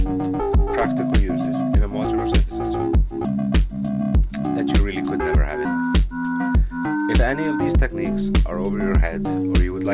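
No technical faults can be heard anywhere in this recording. Nothing in the sound points to a problem along its path.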